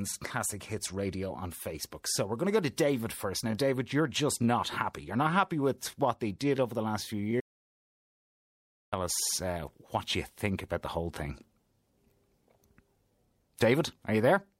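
There's a Bluetooth SBC bit pool drop from 4.97 to 6.68 s. The top end goes dull and a gritty noise creeps in, which fits the phone cutting the bit pool from around 31 to 16 (roughly 110 kbps) on a busy link, starving the high sub-bands and coarsening the rest. Then from 7.40 to 8.93 s there's an audio dropout to silence lasting about 1.52 s. It's plain silence with no room tone, so whatever played there is gone, likely from the input briefly disconnecting or the link failing.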